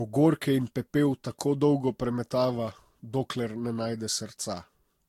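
Throughout the speech the sound is swirly, smeared and hollow, with blurred attacks and nothing above 16.7 kHz. This is generation loss, likely from about four successive lossy passes at roughly 65 to 68 kbit/s. Each pass added its own artefacts, making it worse than one encode at that rate.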